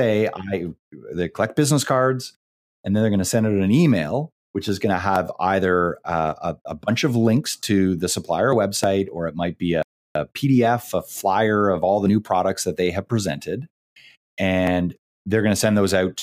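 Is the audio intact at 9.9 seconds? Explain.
No. At 9.9 seconds the speech is in a playback stall running from 9.83 to 10.15 s, about 330 ms, just after "or it might be". The output drops to silence in mid-flow and then resumes. The likely cause is the player running short of buffered data, or its playback thread being blocked, so nothing reached the output until it recovered and continued.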